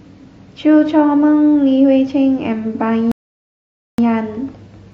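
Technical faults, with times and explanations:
3.12 to 3.98 s, rebuffering stall: the speech drops abruptly into silence for about 0.87 s, then picks up again at exactly the point where it stopped, with nothing skipped. The player had exhausted its downloaded audio and paused until more data arrived, adding time rather than losing any.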